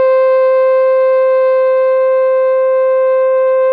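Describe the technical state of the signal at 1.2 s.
At 1.2 s the music plays through intact, with no dropout, click, distortion or other fault in the signal at that moment.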